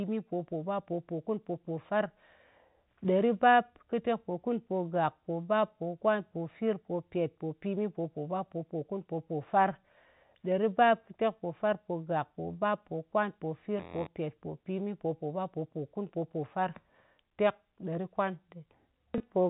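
Right near the end, at 19.18 s, there's a brief packet loss with the last packet repeated. The receiver lost about 20 ms of audio, which points to a single dropped packet, and filled the gap by playing the previous packet again. That repeated chunk is a single packet, so you get a small blip rather than a sustained buzz. The audio stays within the 4 kHz telephone band of the G.711 coding throughout.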